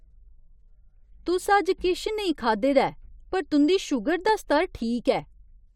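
At 4.29 to 4.31 s a single loud pop cuts across the speech, lasting only about 20 ms and peaking a few decibels above the level of the talking. It sounds like a sharp pop or thump. The likely cause is a voltage spike from a plug, switch, static discharge or driver glitch entering the signal chain. Unlike a dropout, the speech continues uninterrupted beneath it. Unlike crackle, it occurs once instead of repeating.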